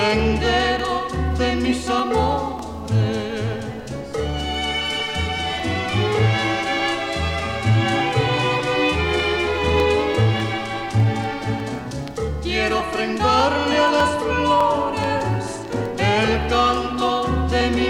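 Regular clicks recur every 0.6 s from 0.19 to 17.61 s, roughly thirty in all, likely clock drift buffer slips from an inter-device clock mismatch near 700 ppm.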